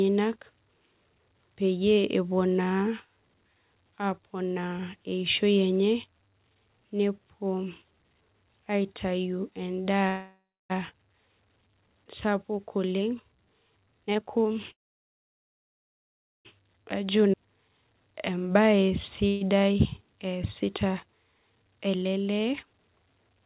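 Speech, band-limited to nothing above 4 kHz, which fits a narrowband call codec such as G.711 A-law, carries three call audio freezes, most likely from packets held up in transit until the jitter buffer ran dry. At 10.08–10.72 s the last sound is stretched into a fading buzz that ends in about 0.29 s of silence. At 14.70–16.47 s it drops to roughly 1.7 s of silence. At 19.28–19.43 s a brief 0.13 s tail stays audible throughout. On a spectrogram each freeze shows as a smeared, featureless band before speech resumes where it stopped. Jitter buffer speed-up follows as the receiver trims pitch periods to shed the built-up delay. At 13.81–14.52 s speech runs at 159% speed, losing roughly 0.4 s and sounding clearly rushed. At 17.15–19.23 s it runs at 110%, losing about 0.2 s, and at 21.62–22.54 s at 113%, losing about 0.15 s. Harmonic spacing stays unchanged while syllables look compressed in time. 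Within the second speed-up, at 17.32–17.35 s, a skip ahead drops about a second of audio outright. The waveform shows two segments butted together with an abrupt vertical seam and almost no gap.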